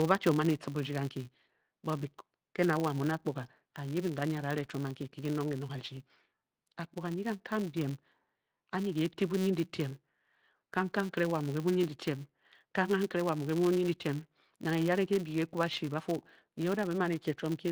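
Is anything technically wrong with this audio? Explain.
Yes. Throughout this speech clip there is a steady buzz at 188 Hz, a rapid ticking that grows and fades with the loudness of the talking. That is a filter restarted on every block: the filter loses its memory at each block boundary and begins again from silence, so every block opens with a small click, and a rate of 188 Hz fits a 256-sample block. The light Opus voice compression is separate from this buzz.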